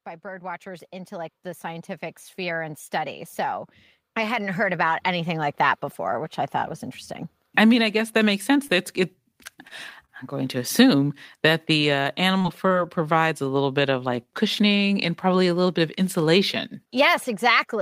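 The level swells twice, voice and background together: from 0.21 to 2.87 s it climbs by about 8 dB, and from 4.14 to 6.27 s by about 7 dB. This is automatic gain rising, the gain control judging the input too quiet and gradually turning it up.

Between 8.67 and 10.10 s, roughly four brief ticks and smears break the speech, the longest around 30 ms, with about 70 ms patched in all. These scattered short gaps come from isolated lost or late packets, each hole filled by extending the preceding sound.

From 12.38 to 12.72 s the speech turns choppy. Three gaps, the longest 21 ms, are concealed with 63 ms of filler, about 18% of that stretch. This is repeated packet loss giving a robotic sound, with holes arriving in quick succession and each patched by continuing the last sound.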